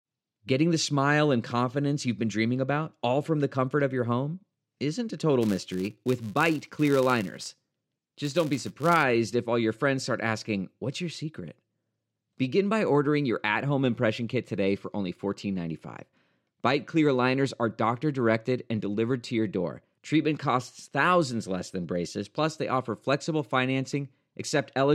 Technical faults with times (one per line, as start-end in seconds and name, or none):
5.41-9.04 filter restarted on every block